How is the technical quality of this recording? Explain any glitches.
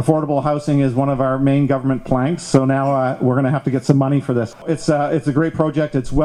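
The technical quality of this recording is fine, with no glitches to explain.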